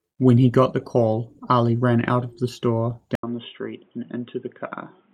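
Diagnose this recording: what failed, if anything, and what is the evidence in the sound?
The capture stage likely switched to a poorer input device. At 3.15 s the speech drops out for 80 ms, then returns boxy and dull with nothing above 3.8 kHz, roughly 5 dB quieter, over a new background noise about 40 dB down that lasts to the end.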